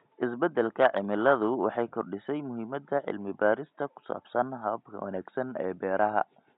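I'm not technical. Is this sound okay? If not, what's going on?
Yes, nothing here is faulty; the faint background noise is just the room the microphone was in, sitting far below the speech.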